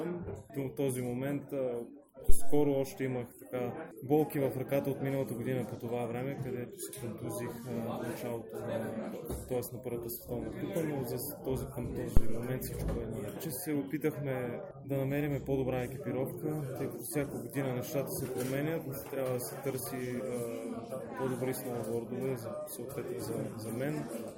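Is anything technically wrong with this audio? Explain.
Yes, there are two phantom power thumps, at 2.29 to 2.77 s and 12.17 to 12.47 s. Supply voltage switching on a live input pushes a step through the coupling capacitors, giving deep thumps peaking at about -9 and -10 dBFS and dying away over roughly 107 and 68 ms.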